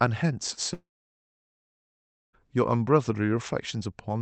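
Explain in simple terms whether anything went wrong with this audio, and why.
From 0.73 to 2.35 s the sound cuts out into a brief fading buzz, then silence; this is likely a long network dropout that lost about 1.6 seconds.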